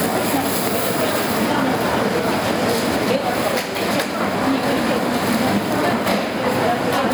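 From start to finish the sound shows gain pumping: the gain swells back up in the gaps and then ducks whenever a loud sound arrives, a swing of around 10 dB. Loud and quiet moments sit unnaturally close in level, giving a squashed, breathing quality. The likely cause is an input gain set far too high, with a fast limiter or compressor clamping down on each peak. On a waveform the envelope looks flattened, with peaks pinned near one ceiling and the noise floor rising between events; a spectrogram shows the broadband background brightening in the pauses and dimming under each loud sound.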